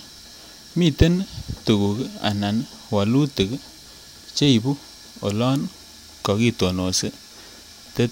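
A short speech recording with nothing technically wrong to point out anywhere in it.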